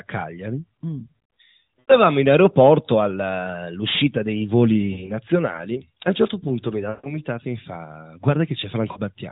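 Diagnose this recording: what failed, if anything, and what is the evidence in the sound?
Lost AMR speech frames on the radio link at 1.81, 4.92, 6.90 and 8.92 s. Corrupted frames failed their checks, so the decoder reused its last good pitch and vocal-tract settings with falling gain. Each gap smears and fades, longest about 140 ms, just before "e mi fa".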